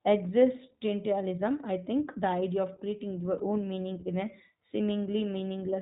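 iLBC codec, throughout: the speech is narrowband, with nothing above 4 kHz, and carries a plainly audible rough, slightly synthetic edge. The codec models each short frame's excitation independently, and the result is consistent with a rate near 15.2 kbps and 20 ms frames.

Lost iLBC frames, from 3.38 to 3.41 s: a brief held, faintly buzzy vowel-like sound replaces the speech, which fits a single missing 20 ms frame. The decoder concealed the gap by repeating the last pitch cycle blended with noise, and the voice recovers almost immediately afterwards.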